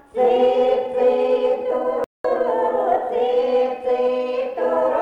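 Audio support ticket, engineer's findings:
Playback stall, 2.04–2.24 s: output drops to silence for 203 ms mid-flow, then resumes. Waveform shows a flat silent gap with hard edges. Spectrogram shows a clean vertical blank band across all frequencies. Likely player buffer underrun or blocked audio thread starving the output device until data returned.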